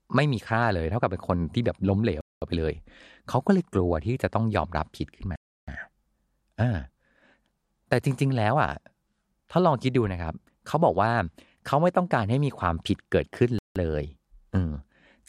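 The speech cuts to dead silence three times: from 2.21 to 2.42 s (about 0.21 s), from 5.36 to 5.68 s (0.32 s), and from 13.59 to 13.76 s (0.17 s). These are most likely Bluetooth stalls, where radio interference held back packets until the headphones' buffer emptied and playback halted. Packet-loss concealment would fill the gap with smeared or warbling sound, and a noise gate would fade out, but these gaps are abrupt, fully silent pauses.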